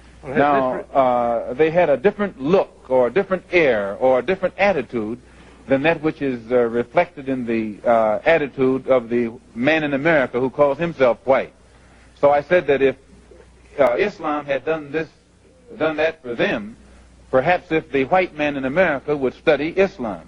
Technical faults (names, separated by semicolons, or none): channel delay (comb filtering)